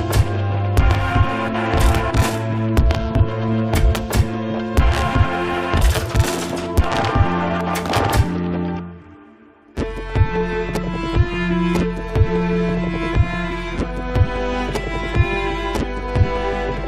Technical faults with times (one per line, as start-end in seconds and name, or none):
none